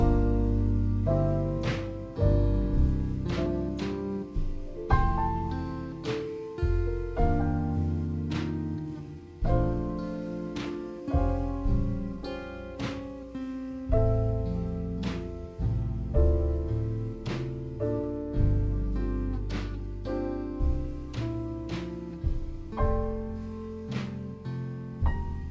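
From start to finish the audio plays with a wrong sample rate: everything runs at 0.667 times normal speed and sits about 7 semitones low, sluggish and dark. That ratio fits material recorded at 24 kHz being played back at 16 kHz without conversion.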